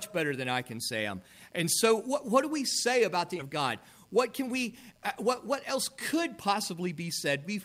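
At 3.39 s there is a skip ahead: roughly 0.7 s of audio was discarded while later audio already sat waiting, so playback jumps straight across with no silence or filler. Unlike a dropout, nothing is heard missing as a gap; the two sides simply butt together.

From 4.04 to 5.48 s and again from 5.97 to 7.56 s, a jitter buffer speed-up runs the audio at about 105% speed, trimming short pitch-period slices to shrink excess buffered delay, around 70 ms and then 100 ms in total. Pitch stays put, which separates it from resampling or a clock drift, but the pace sounds slightly hurried.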